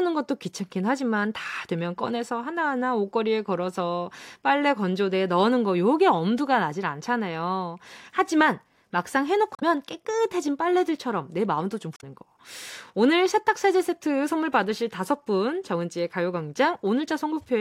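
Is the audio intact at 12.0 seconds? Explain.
No. From 11.96 to 12.04 s there is damaged data in the compressed stream: the decoder misreads corrupted frames and loses sync, producing a brief chirp, squawk, click or short hole in the speech. On a spectrogram and waveform it shows as an abrupt break in the speech.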